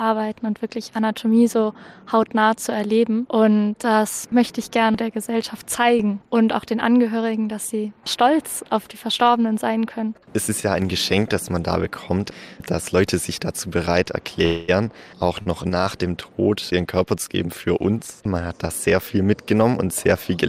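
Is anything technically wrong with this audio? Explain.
Yes, there are two timing faults close together.

A call audio freeze runs from 14.45 to 14.70 s: the last sound is carried on for about 227 ms as a fading buzz or hiss, then the audio resumes where it stopped. This is likely packets held up in transit, draining the jitter buffer.

A short stall from a late packet follows at 15.42 to 15.48 s: one packet arrived after its playout time, so the receiver stretched the preceding sound by 39 ms with a slight buzz or dip before continuing from the same point.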